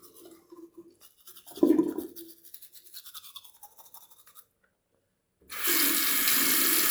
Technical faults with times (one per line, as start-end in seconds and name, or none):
none